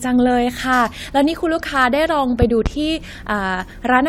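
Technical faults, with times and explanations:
2.42–2.69 s, loud pop: two sharp pops stand roughly 15 dB above the speech, likely a voltage pulse from a plug or switch added to the signal.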